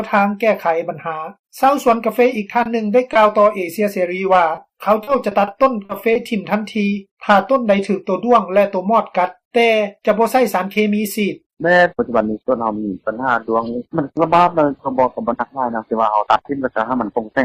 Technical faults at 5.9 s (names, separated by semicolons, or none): short concealed packet loss